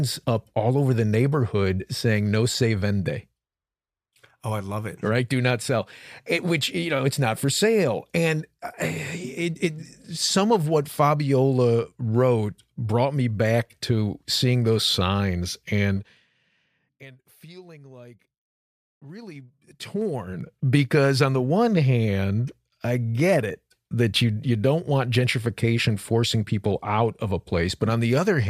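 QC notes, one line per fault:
15.96–16.30 s, zipper noise: just after "to seeing those signs" the level drops by about 25 dB in 2 dB steps at a rate of around 30 per second. Each unsmoothed step leaves a small click, so a fast ticking rides on the fade.
19.03–20.57 s, zipper noise: the level comes back up by about 25 dB in 2 dB steps, slower at around 7 per second, ending before "because on the one". Each step leaves a click, so a slower ticking rides on the sound as it rises.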